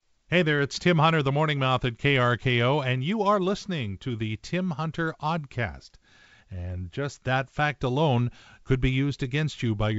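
No faults are audible in this speech: it has the band-limited sound of G.722 wideband telephone coding, with content stopping near 7.7 kHz and any coding hiss faint at most, which fits the codec's full 64 kbit/s mode.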